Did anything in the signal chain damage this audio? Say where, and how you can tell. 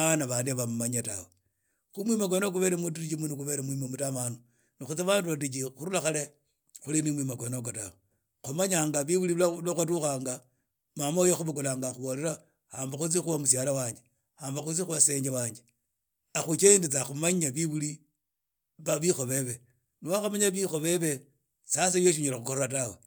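No, nothing in the signal chain damaged this audio.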